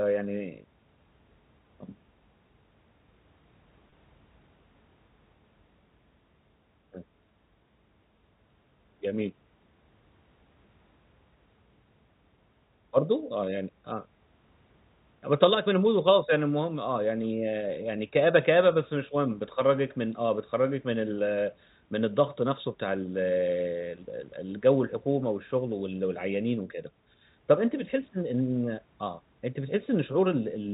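Speech carried over a G.711 telephone coding path, with nothing above 4 kHz. At 3.90 to 3.92 s it briefly turns buzzy and held. This is packet loss with pitch repetition: a 20 ms gap, consistent with a single lost packet, was bridged by repeating the last pitch period.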